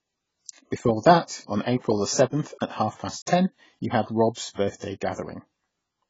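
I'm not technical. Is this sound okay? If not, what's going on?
No. AAC compression affects the whole recording, from start to finish. The speech sounds dull and muffled, with nothing above about 7.6 kHz, so the crisp top end of consonants like s and t is missing. This likely comes from squeezing the audio hard into a very small file: the encoder keeps only what it judges most audible and throws the rest away, which leaves a smeared, fizzy, warbling texture on hissy sounds.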